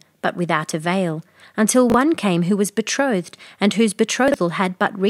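At 1.90 to 1.94 s, after "but without avail until", and at 4.28 to 4.34 s, after "was betrothed and whose", chunks play out of order: a 20 ms block arrives one, then two, blocks late. Unlike a dropout, nothing is missing. Each jumble leaves three hard joins.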